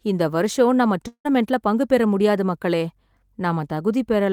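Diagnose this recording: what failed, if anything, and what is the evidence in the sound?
At 1.07 s the speech smears into a fading buzz, then silence, until 1.27 s before "பங்கு பெற முடியாது மக்களே". This is likely a long network dropout, with the receiver's concealment filling the gap.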